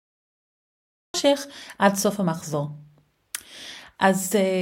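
A speech clip with a cut-off start: the first 1.14 s is dead digital silence, and then the audio just appears at 1.14 s already partway into a sound, with no natural attack or lead-in at all. What you're hearing is a capture or stream that got going late, so whatever was being said before that point never made it in, and the talker seems to pick up mid-syllable out of nothing.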